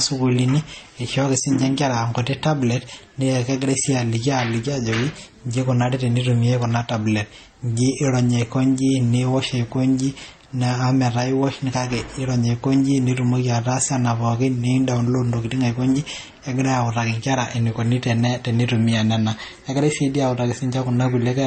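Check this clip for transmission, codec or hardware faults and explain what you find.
Two faults are audible in this speech recording: a stacked codec sound across the whole clip, and one brief level dip near the start.

Throughout, the speech sounds dull and smeared, with nothing above about 8.7 kHz and two different kinds of artefact layered together. This is likely transcoding between lossy codecs. The character fits an MP3 encode near 33 kbit/s later re-encoded as HE-AAC at around 32 kbit/s. The second encoder spent its limited bits reproducing the first one's damage while adding its own, and the lower bandwidth limit carried through.

From 1.40 to 1.45 s, for about 52 ms, the level drops abruptly by about 6 dB before everything snaps back. This is likely one channel dropping out. With one stereo channel missing, the mono sum loses half of the shared content, which produces the 6 dB step.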